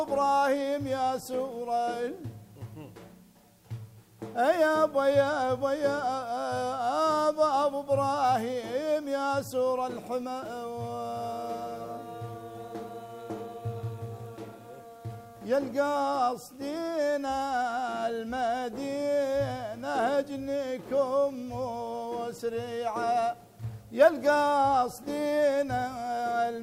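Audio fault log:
Throughout, low bit depth with dither: there's a steady, even hiss sitting under everything, somewhere around 35 dB below the signal, and it never pumps or changes character with level. The audio has been squeezed down to 10 bits, with a little random noise mixed in before rounding, so the quantisation error gets spread into smooth white noise instead of gritty distortion. You hear clean sound with a constant hiss floor underneath.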